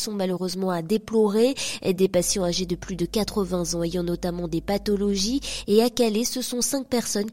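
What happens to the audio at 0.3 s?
Nothing goes wrong at 0.3 s: the audio runs on intact through that moment, with no dropout, click or distortion to be heard.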